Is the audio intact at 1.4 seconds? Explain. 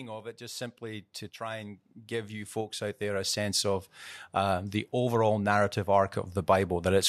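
No. From 0.38 to 5.23 s, automatic gain rising lifts the level by about 15 dB, swelling speech and background together. The waveform envelope widens steadily.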